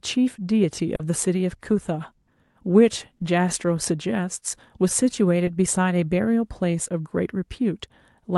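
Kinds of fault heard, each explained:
Short concealed packet loss: at 0.95 to 1.01 s, 3.17 to 3.21 s and 5.45 to 5.49 s, bits of the call arrived too late to decode, about 40 ms in the first gap and 20 ms in the other two. Each time the receiver filled the hole by extending the preceding sound, continuing its pitch or substituting shaped noise, then cross-faded back to the real signal, leaving a brief smear or wobble.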